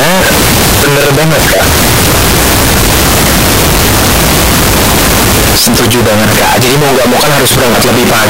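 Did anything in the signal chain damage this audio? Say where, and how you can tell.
Yes, at the sample-format conversion stage, across the whole clip: a float read as integer. The speech is very loud and harsh from start to finish, with the background noise as loud as the talking, yet the pitch contour can still be followed. That points to 32-bit float samples being read as 32-bit integers, which is the likely cause: the sign and exponent bits then set each value, flattening the waveform into near-square blocks at an almost fixed, high level. Gain-stage clipping would track the level and leave quiet passages quiet; here silence is as loud as speech.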